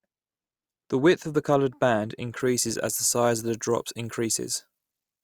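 Speech with pre-emphasis left on from 2.40 s to the end: treble sits about 11 dB hot at 10 kHz, fitting an uncorrected 50 µs FM curve, and the spectrogram shows brightened upper bands.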